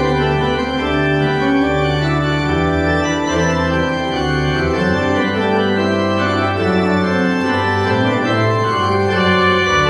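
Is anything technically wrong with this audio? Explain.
No, nothing technically wrong can be heard in this audio.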